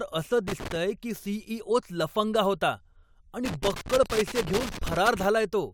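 Irregular bursts of crackle and scratching break up the speech from 0.48 to 0.76 s and again from 3.45 to 5.25 s: loose connector crackle, a worn contact rapidly making and breaking the signal.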